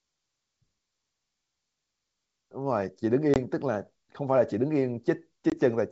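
Packet loss on an ADPCM call drops about one 20 ms packet at 3.34–3.38 s and 5.50–5.57 s: a hard gap, then the speech recovers slightly distorted while the decoder's predictor resyncs.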